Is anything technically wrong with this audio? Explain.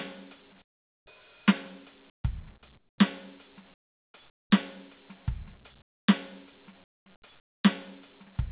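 Yes. Comfort noise replaces the background at 0.62–1.06, 2.1–2.24, 2.78–2.98, 3.74–4.14, 4.3–4.5, 5.82–6.08, 6.84–7.06 and 7.4–7.64 s. In these quiet stretches of the music, the real background drops out and a steady, featureless hiss takes its place. The hiss sits about 10 to 22 dB below the surrounding background. This is likely discontinuous transmission, with the receiver synthesising noise in place of the background. The music, band-limited to 4 kHz as expected for a narrowband call path, resumes normally after each gap.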